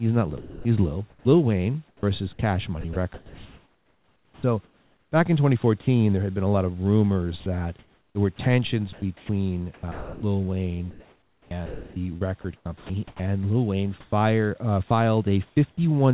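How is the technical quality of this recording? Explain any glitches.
The recording is choppy in three stretches, where pieces of the speech drop out and are replaced by a soft synthetic hiss. The audio has a telephone-band character with nothing above 4 kHz, which fits G.711 mu-law at 64 kbps. Faint room noise sits about 42 dB below the speech.

Sound chopped by the voice detector occurs from 0.38 to 5.87 s, ending just before "there had been a". It recurs from 7.4 to 13.2 s and from 14.0 to 15.8 s. In the first two stretches roughly 2.5 s and 2.3 s of sound are lost. In the third, only about 0.3 s is lost. The likely cause is the sender's voice detector judging quieter syllables and word edges to be silence and switching transmission off, with the receiver filling the gaps with comfort noise. You hear clipped onsets and tails. On a waveform, the speech envelopes end abruptly in low, even-amplitude blocks. 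On a spectrogram, those blocks show as uniform, featureless noise with no harmonics, sharply bordered against the speech around them.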